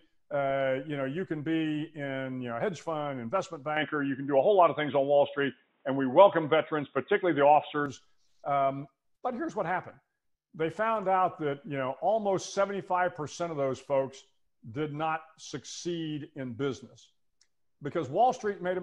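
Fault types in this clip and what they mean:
Input switched to a poorer device: From 3.77 to 7.86 s the sound turns dull and boxy, with nothing above 3.8 kHz. The level shifts by about 5 dB. A faint new noise floor appears. This is likely a narrower-band microphone taking over.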